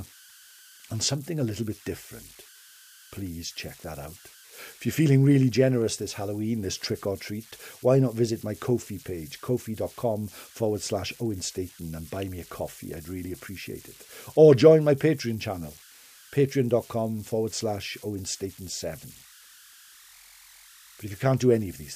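From start to finish, the speech carries converter idle tones. A delta-sigma converter was run without dither. When the input sits near silence, its modulator locks into repeating bit patterns. Those patterns form a tone, here somewhere around 1.5 kHz. Its pitch follows the small offset at the input. In the pauses it comes through as a whistle. Under quiet syllables it turns into a grainy hiss, about 25 dB below the speech.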